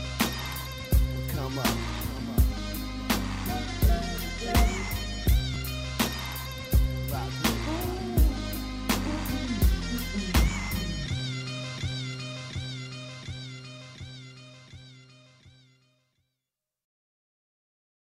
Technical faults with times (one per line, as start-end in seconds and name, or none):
5.54 chunks out of order